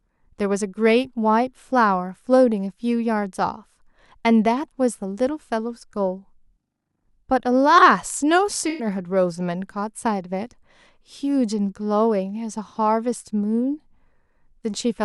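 At 8.69 to 8.87 s the speech turns briefly smeared and phasey, a blurred, noisy patch. This is AAC frame loss with concealment: a short run of frames, pointing to about five, went missing, and the decoder rebuilt them from the last good spectrum.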